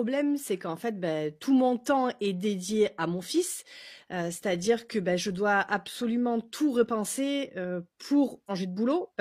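A stream segment skipped at 8.46 to 8.51 s: the speech jumps abruptly forward with a brief blip, as if part of the programme is missing. The likely cause is one stream segment failing to load, so playback resumed from the next.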